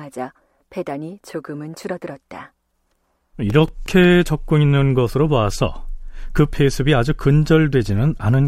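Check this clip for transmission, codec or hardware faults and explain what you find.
One fault is present: CD scratch ticks between 2.78 and 4.22 s. Nine ticks arrive at about six per second, the longest roughly 4 ms. Once per disc revolution, a scratch destroys more data than error correction can rebuild, so the player interpolates or mutes those samples.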